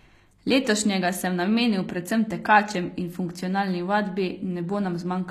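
From start to finish the sibilants sound gritty and metallic, with s sounds edging toward a lisp, while the treble is synthetic, and nothing is heard above about 14.9 kHz. This is likely HE-AAC compression: the codec keeps only the lower spectrum and rebuilds the upper bands by copying lower content upward under a coarse envelope, so the high harmonics no longer line up with the real ones. The plainly audible damage fits a low bitrate around 24 kbps.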